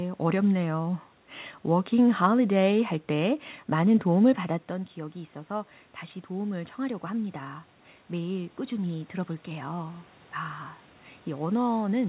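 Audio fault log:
4.68–10.14 s, automatic gain rising: just after "할 때 많은 도움을" the speech falls by about 12 dB as the talker moves away, and the gain control slowly climbs back by about 7 dB over five seconds. This is not the talker returning, because the room noise swells in step with the voice, so the whole level creeps up together. The narrow band with nothing above 4 kHz is the telephone-style call path, not part of this fault.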